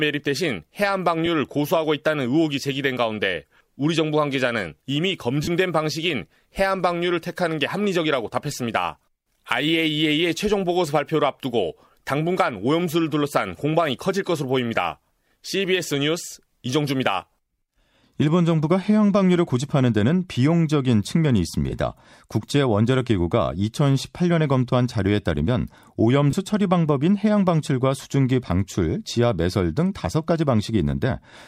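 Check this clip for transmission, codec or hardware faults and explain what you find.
Four brief gaps in this speech come from lost LE Audio frames: at 1.26 s, 5.43–5.48 s, 21.70–21.72 s and 26.31–26.33 s, lasting 15, 37.5, 22.5 and 22.5 ms, lengths that fit 7.5 ms LC3 frames. The decoder reuses the last spectrum with randomised signs, so pitched voice briefly becomes a noisy, fading smear instead of a hard silent hole or a click. The longer 5.43 s loss fades further than the others.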